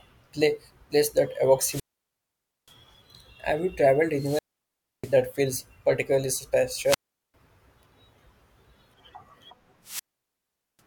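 Wireless microphone squelch dropouts occur at 1.61 s after "pla place that", 4.13 s after "you traveled", 6.83 s after "feels particularly", and 9.83 s. Each time the radio link fades, hiss swells briefly, and the receiver mutes the speech for about 0.88, 0.65, 0.40 and 0.80 s respectively.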